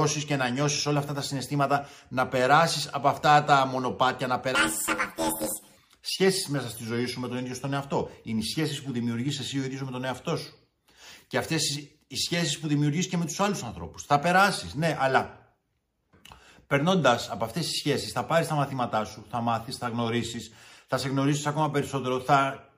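From 4.55 s to 5.77 s the audio turns into a robotic buzz, the sign of planar audio read as interleaved. Each block of all-left then all-right samples is taken as alternating pairs, so both channels play back to back at double speed. The blocks here are short, about 11.61 ms, which fits a 512-sample block, so the buzz sits at 86.1 Hz. Unlike a sample-rate error, there is no octave jump and the pace stays right.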